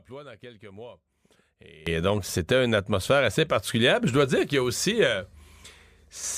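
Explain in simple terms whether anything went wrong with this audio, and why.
Yes, something went wrong at about 1.87 s: a sudden gain jump. The speech and the background noise both get much louder in one instant and stay that way to the end, most likely from a volume setting applied all at once instead of eased in.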